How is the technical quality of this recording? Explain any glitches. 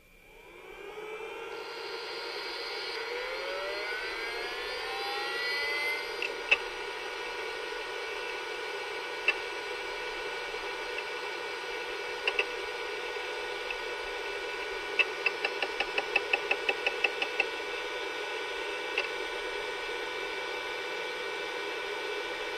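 Nothing in the recording stood out as a technical problem on listening, so there are no glitches to explain.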